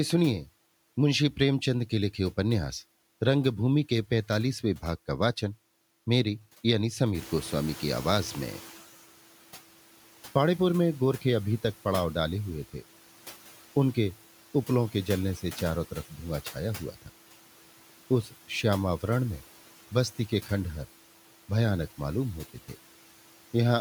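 Throughout the speech, the background sinks in the gaps and swells back under each phrase. These are noise suppressor artifacts: the suppressor pulls down, frame by frame, every band it judges to be steady noise, by about 12 dB here. Because its decisions shift from frame to frame, the residual noise pumps with the speech.

Just after 7 s the room noise jumps by about 14 dB. From 7.14 to 8.83 s that louder noise comes through with too little reduction, only about 9 dB, and then settles lower. This is the noise suppressor catching up. Its noise estimate lagged behind the sudden rise and needed about 1.7 s to adapt. Once it caught up, the room noise sits about 19 dB below the speech.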